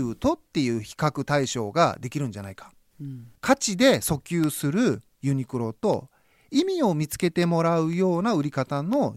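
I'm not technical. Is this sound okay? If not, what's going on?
No. Periodic USB or driver dropouts run from 0.44 s to 8.93 s: about every half second, a background task stalls the audio connection and a tiny sliver of speech, a fraction of a millisecond, turns to silence, heard as roughly twenty regular ticks.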